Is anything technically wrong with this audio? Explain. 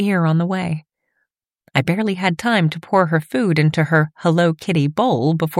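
No, nothing technically wrong stands out here; it all sounds just as it should.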